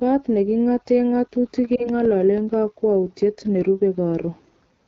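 Short speech clip, around 5 seconds, and the whole thing has that rough, raspy edge you get from the AMR wideband (HD Voice) codec running at one of its bottom rates, which fits the 8.85 kbit/s mode. At that rate the pulse-driven vocal tract model up to 6.4 kHz is working with very few bits, so the voicing comes out gritty, and the top band from 6.4 to 7 kHz is just shaped noise filling the gap. The codec damage is plainly audible rather than subtle. On top of that there are CD scratch ticks from 1.41 s to 2.54 s: eight little clicks in just over a second, so roughly seven a second, the longest only about 2 milliseconds. That regular spacing is the once-per-revolution signature of a blemish wiping out more data than the error correction can rebuild, leaving the player to interpolate or mute a tiny stretch each time round. Overlapping that, between 1.76 s and 1.90 s, there's a brief dip and warble that sounds like a single lost 20 ms AMR speech frame. 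When a frame fails its checksum, the decoder carries forward the last good pitch and vocal tract settings at reduced gain, so you hear a quick sag instead of a gap, and the speech comes back weak and rough for a moment before it settles.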